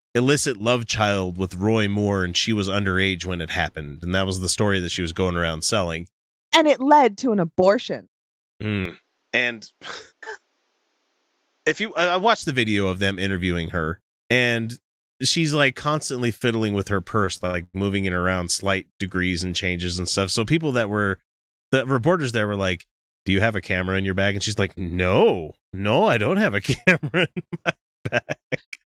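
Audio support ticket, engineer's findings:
Input switched to a poorer device, 8.85 to 12.43 s, returning just before "the video of them". Sound goes dull and boxy with no gap at the switch. Level drops about 5 dB, with a new noise floor roughly 45 dB under the signal. Likely cause: capture path moved to a narrower-band mic or headset call profile. Spectrogram shows a hard ceiling at 7.6 kHz across that span, with a raised noise band. Waveform envelope steps down at the start and back up at the end.

Repeated stalls (stutter), 17.25 to 17.76 s, between "constantly fiddling with her" and "moving it around slight". Four stalls, 222 ms of stretched fill in total, 44% of the span, longest 101 ms. No audio lost, but the sound drags and stumbles. Jitter buffer underran repeatedly as packets arrived late, and the receiver extended the last sound each time. Spectrogram shows smeared, held harmonics in short blocks. 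Waveform shows repeated cycles with fading tails.

Jitter buffer speed-up, 26.89 to 27.53 s. Delivery hurried at 107% with pitch unchanged, roughly 50 ms dropped in total. Buffer was overfilled, so the receiver trimmed short pitch-period slices in succession to pull latency back. Spectrogram shows compressed time spacing with harmonic frequencies intact. Waveform shows slightly shortened segments with closely spaced splice points.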